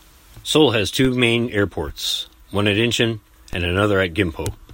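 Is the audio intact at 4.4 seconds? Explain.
Yes, the audio is intact at 4.4 seconds, with no fault audible at that moment.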